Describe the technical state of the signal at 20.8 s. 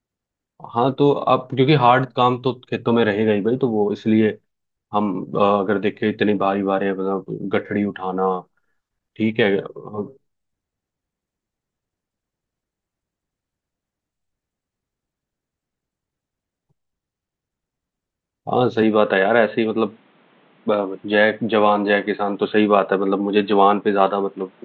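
At 20.8 s you're inside an input switched to a poorer device, running from 18.82 s to the end. The speech turns dull and boxy with nothing above 4.2 kHz and a faint new noise floor, likely from a narrower-band mic taking over, with no gap and no real level jump.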